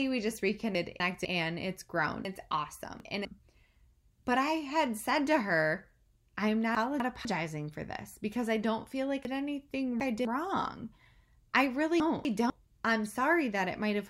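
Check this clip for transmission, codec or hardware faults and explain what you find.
There's one fault here, repeated five times: chunks out of order, at 0.75 to 1.25 s, 2.25 to 3.25 s, 6.75 to 7.25 s, 9.25 to 10.25 s and 12.0 to 12.5 s. Each time a 250 ms chunk turns up one or three chunks late, so the speech briefly jumbles, with three hard joins.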